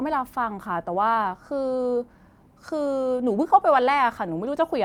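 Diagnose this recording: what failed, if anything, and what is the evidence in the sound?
Nothing in the speech recording points to a failure at any stage of the chain, from capture through playback.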